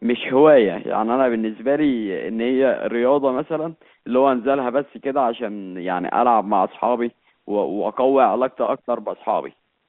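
No technical faults can be heard in the speech. It has the sound of an ordinary G.711 telephone line, with the band held to about 150 Hz to 3.5 kHz and, at most, a faint quantisation hiss that rises and falls with the level.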